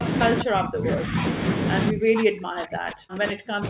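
At 0.39 to 0.44 s a faint delayed copy of the speech slips through, lagging about 195 ms and sitting roughly 15 dB below the direct speech. This is an echo leak, most likely from a far-end loudspeaker whose echo canceller let part of the pickup return. The fixed delay sets it apart from room reverberation, which would trail smoothly rather than repeat as a separate copy.

Right after it, from 0.44 to 1.23 s, the speech is pulled down in pieces for around 700 ms in total, dropping by as much as about 30 dB. This is speech suppressed in double talk. The canceller likely could not separate the near talker from the echo while both sides spoke, so it attenuated both. The same happens from 1.91 s to the end, with drops as deep as about 40 dB. All of this sits within the call path's 4 kHz bandwidth.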